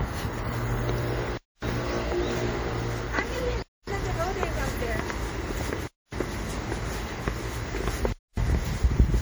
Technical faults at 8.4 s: transcoding between lossy codecs; gap between chunks

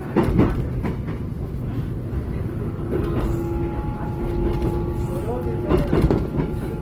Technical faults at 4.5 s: Opus compression

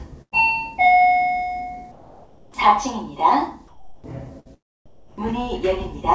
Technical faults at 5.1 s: comfort noise in place of the background

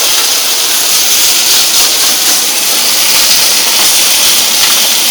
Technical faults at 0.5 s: hard clipping

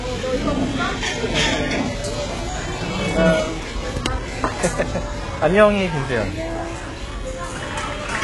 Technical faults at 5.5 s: HE-AAC compression

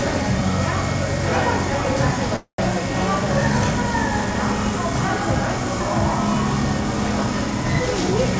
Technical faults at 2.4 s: call audio freeze

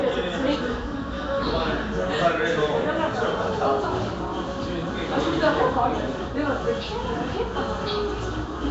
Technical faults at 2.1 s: Nellymoser compression

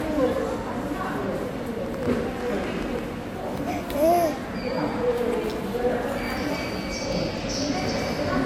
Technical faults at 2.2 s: transcoding between lossy codecs; train of clicks

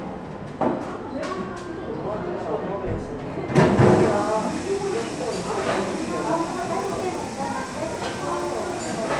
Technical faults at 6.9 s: resampler restarted on every block

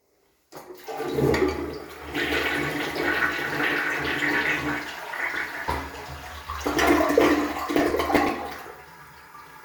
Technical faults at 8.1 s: processor overload crackle

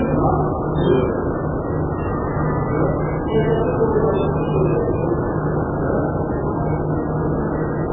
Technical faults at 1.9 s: MP3 compression

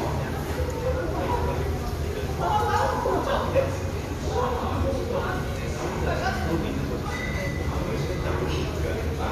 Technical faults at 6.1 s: none

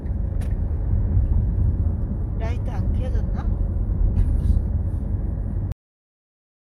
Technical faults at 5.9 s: cut-off end

